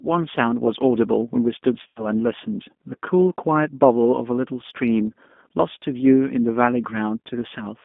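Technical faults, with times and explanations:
Throughout: G.729 codec. The speech has been squeezed through an 8 kbit/s G.729A voice coder, and the damage is plainly audible. Nothing comes through outside a telephone band of roughly 200 Hz to 3.5 kHz, so the sound is narrow and muffled. Each 10 ms frame is resynthesised from a vocal tract filter, a pitch predictor and a few pulses, not from the actual waveform, which gives the voice its rough, slightly synthetic grain.
1.88 to 2.08 s: VoIP packet loss concealed by the speech codec. About 80 ms of audio went missing, which fits four lost 20 ms packets. The decoder filled the gap by repeating its last pitch and filter settings at falling gain, so the sound smears into something stretched and fading. Every frame is predicted from the one before it, so the speech stays weak and distorted for a short while after the packets resume, up to about 2.08 s.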